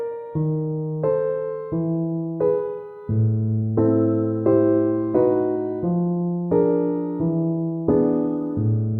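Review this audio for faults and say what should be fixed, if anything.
No faults turned up in this audio, so there is nothing that needs to be fixed.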